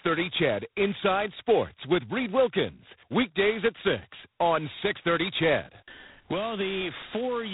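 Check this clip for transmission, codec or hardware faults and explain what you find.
One codec fault runs throughout. G.726 ADPCM damage, heavy, consistent with the 16 kbit/s mode. Few bits per sample leave coarse prediction errors. Speech gets a rasping hiss tracking its level, nothing above 3.9 kHz.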